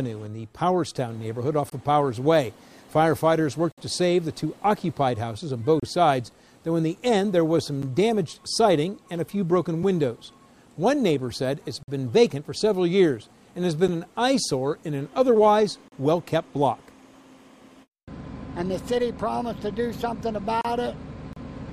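Seven holes of silence with hard edges interrupt the sound, each near a 2-second boundary: 1.70 to 1.72 s, 3.72 to 3.78 s, 5.80 to 5.83 s, 7.82 s, 11.83 to 11.88 s, 13.88 s, and 15.88 to 15.92 s, lasting from about 9 to 59 ms. This is a gap between stream segments. The timestamps of adjacent 2-second segments fail to meet, so the player fills the space with silence. Unlike a dropout, nothing is lost, and the sound resumes exactly where it stopped.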